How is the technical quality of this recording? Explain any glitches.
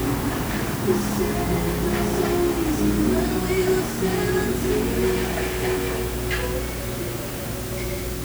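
Poor: a loud, constant hiss covers the whole recording.

Low bit depth with dither runs throughout the clip. The audio is stored with only 5 bits, and dither noise was added before rounding. This turns the coarse quantisation error into steady white noise. It sits only around 15 dB below the sound and is heard as an even hiss, with no distortion.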